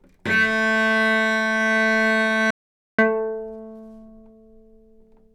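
At 2.51 s the sound cuts off abruptly and stays in total silence until 2.99 s, when it returns just as suddenly, mid-flow. For those 0.48 s there is no background or room tone at all, and whatever was happening in that stretch is simply missing. This is an audio dropout to silence, likely caused by the input being briefly lost through a disconnect, link failure or accidental mute while recording carried on.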